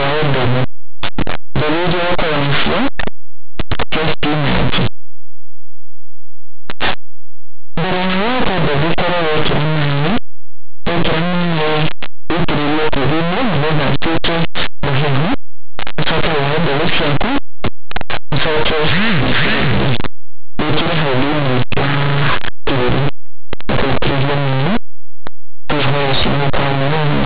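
Linear audio read as companded, throughout: plain linear 8-bit speech samples are expanded as mu-law codes, so values just on one side of zero turn into the largest outputs while those on the other side stay small, giving harsh distortion.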